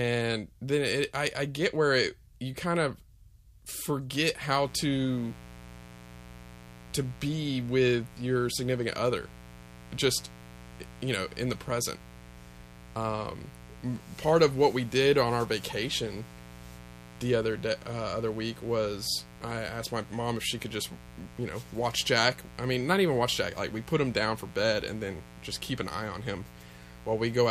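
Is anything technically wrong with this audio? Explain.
Yes, the speech picks up a mains buzz from 4.59 s to the end. Sharp switching spikes at twice the 60 Hz line rate produce a steady, raspy buzz about 20 dB below the speech. On a spectrogram it appears as evenly spaced horizontal lines at multiples of 60 Hz, reaching several kHz.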